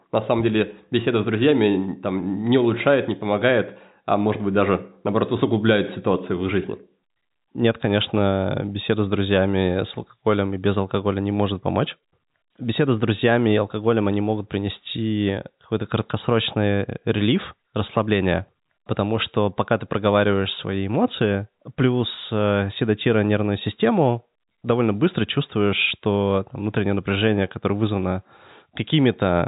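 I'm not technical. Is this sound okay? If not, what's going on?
Yes, this sound is okay; nothing is going wrong in it.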